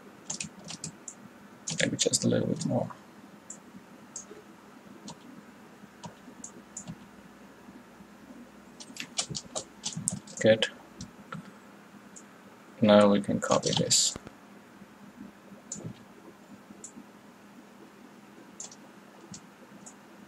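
A sudden voltage step, likely from a plug, switch or static discharge, enters the chain at 14.16 s and produces a loud pop lasting until 14.29 s. Two sharp thumps land in quick succession, peaking a few decibels above the surrounding audio, which continues underneath.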